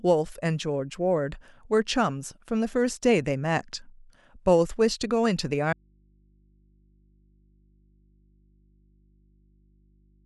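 At 5.73 s the speech cuts out abruptly and stays gone to the end. This is an audio dropout to a faint residue. Only mains hum remains, about 35 dB below the signal. The likely cause is a lost source feeding an input that stayed live.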